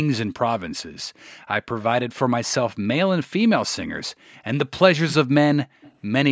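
A loudspeaker echo canceller likely let part of its microphone pickup slip back into the call, causing an echo leak. From 1.8 to 1.85 s and again from 5.82 to 5.94 s, a faint copy of the speech returns about 180 ms late, well beneath the main sound.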